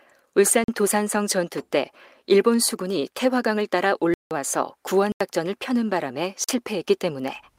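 Blocks of digital silence at 0.64 s (43 ms), 4.14 s (171 ms), 5.12 s (85 ms) and 6.44 s (43 ms). The speech drops abruptly to silence and back without a fade, probably because the output buffer went unfilled. The lengths are whole multiples of one size, which fits a 2048-sample buffer at 48 kHz.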